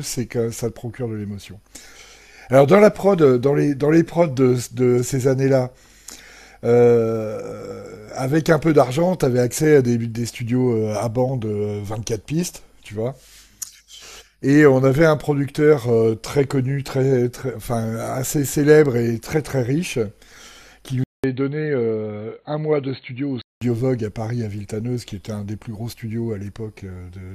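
At 21.04 s the speech drops out for about 200 ms, then returns dull and boxy, a few decibels quieter, with a faint new noise floor well beneath it, until full clarity comes back at 23.61 s. This is an input switched to a poorer device, likely a change to another microphone or a headset's call profile. On a spectrogram the energy stops sharply at 4.3 kHz across that stretch, after a brief blank gap. The waveform shows a short flat gap, then slightly smaller peaks.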